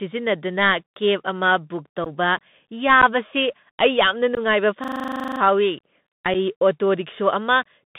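The speech runs throughout over a Bluetooth CVSD headset codec, a 64 kbps one-bit delta link, band-limited to roughly 150 Hz to 3.7 kHz. Sibilants turn scratchy over a granular hiss.

Unconcealed Bluetooth headset packet loss first hits at 2.04 to 2.07 s, where a few voice packets vanish and about 15 ms of sound drops to an abrupt hole. It recurs at 3.02 s (11.2 ms) and 4.35 to 4.39 s (18.8 ms).

From 4.84 to 5.4 s a system hang loop freezes the computer while the hardware replays a 40 ms buffer 14 times, giving a 25 Hz machine-gun stutter.

A final short packet loss at 6.34 s removes 7.5 ms.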